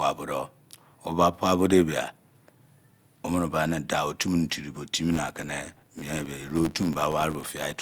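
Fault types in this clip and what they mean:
Filter restarted on every block: the filter loses its state at each block boundary, so each block starts with a small transient. From 4.97 s, after "mini diri tio", this becomes an 86.1 Hz buzz following the speech level, which fits a 512-sample buffer.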